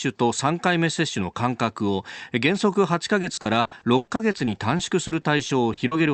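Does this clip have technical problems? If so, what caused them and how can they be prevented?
Yes. From 3.21 s to 5.93 s the connection suffered repeated packet loss, giving a robotic sound. Eighteen separate holes opened in the stream, the longest about 100 ms. The receiver patched each one by stretching out the last sound it had, so roughly 580 ms, about a fifth of that stretch, is synthetic fill. The speech turns choppy, with pieces missing, over the Opus call path's 8 kHz-limited band. A steadier network link or stronger forward error correction would prevent it.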